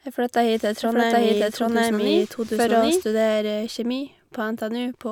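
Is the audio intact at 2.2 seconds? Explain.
No. At 2.2 seconds the clip sits inside a doubled audio track that runs from 0.83 to 3.03 s, starting just after "flytta hit til". A second full-band copy of the speech trails the original by roughly 0.7 s at about the same level, so two out-of-step layers overlap with no decay or room colour, and the copy cuts in and out abruptly. The likely cause is the signal being captured again through a slower path.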